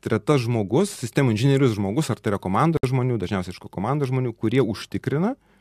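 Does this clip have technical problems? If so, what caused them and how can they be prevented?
Yes: a gap at a join of encoded pieces, 2.77–2.84 s, between "ar tai yra komanda" and "žmonių dažniausiai iš ko". About 63 ms of silence opens from the untrimmed encoder delay and last-frame padding, then the speech picks up where it stopped. Trim each piece's encoder delay and padding before joining, or encode the whole thing in one pass.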